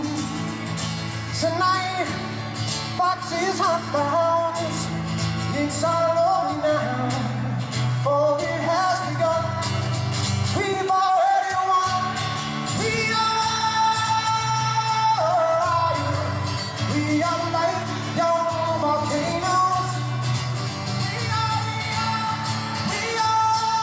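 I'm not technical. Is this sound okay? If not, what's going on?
Yes, it sounds fine; there's nothing wrong to hear.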